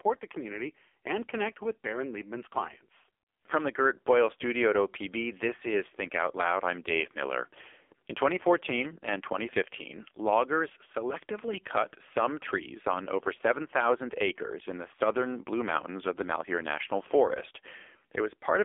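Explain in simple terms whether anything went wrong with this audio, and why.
Yes: the speech went through an AMR narrowband mobile codec at a very low setting, so throughout it sounds buzzy, synthetic and phone-like, with nothing above 3.5 kHz.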